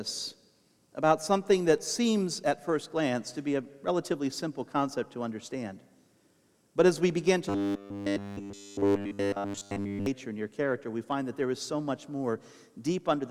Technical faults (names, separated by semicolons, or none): robotic sound from repeated short buffers